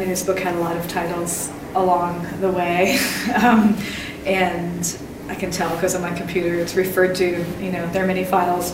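At 1.52 to 1.54 s a corrupt frame was decoded: damaged bits inside a single compressed frame went through the decoder unchecked, so misread codes and gain values were turned into sound. The result is a short blip of misplaced energy lasting roughly 24 ms, about the span of that one frame, with an error peak of roughly -25 dBFS. It comes across as a brief chirp cutting across the audio before the next intact frame takes over.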